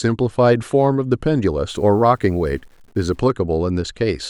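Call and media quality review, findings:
Grainy, signal-following distortion on speech, 1.69–3.19 s, noise about 40 dB below signal; likely low bit depth without dither, consistent with undithered truncation near 9 bits.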